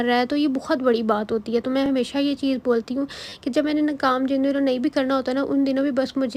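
At 1.86 s, a repeated buffer gives a click. New audio arrived late, so the device replayed its last block once, which fits a 10 ms buffer. From 3.29 to 3.32 s, the same block plays four times in a row, heard as a brief buzz.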